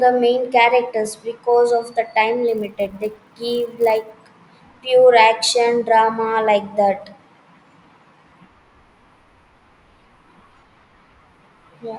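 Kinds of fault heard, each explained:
Resampler restarted on every block: the sample-rate converter is being run fresh on each chunk of audio instead of carrying its history across, so every chunk edge gets a small error where the filter saw nothing useful next door. Here it sounds like a 100 Hz buzz riding on the speech from about 2.48 to 4.1 s, which fits 10 ms blocks in what sounds like a 24 kHz to 48 kHz upsample.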